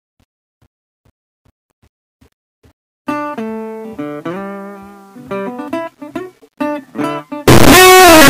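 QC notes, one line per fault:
7.48 to 8.29 s, signed and unsigned mixed up: very loud, harsh distortion, likely a top-bit flip in 8-bit samples; the waveform jumps across its whole range, and the spectrogram turns broadband.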